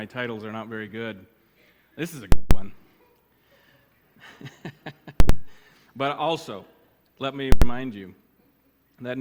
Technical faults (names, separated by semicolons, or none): invalid numbers at full scale